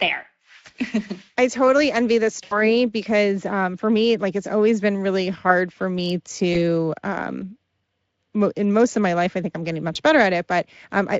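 Speech carried over a Speex link shows VoIP packet loss concealed by the speech codec at 2.43–2.72 s after "I totally envy this", 6.53–6.62 s after "really hard for me", and 9.93–9.98 s after "I think I'm getting". In each, the decoder stretches the last pitch and filter into a sound that fades. The first gap fits about 80 ms of missing audio, and the others about 20 ms.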